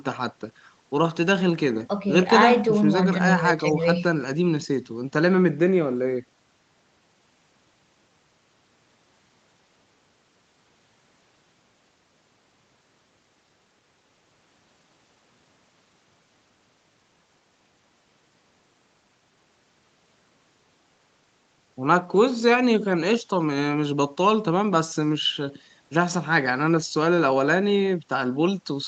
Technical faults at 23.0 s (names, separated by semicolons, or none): none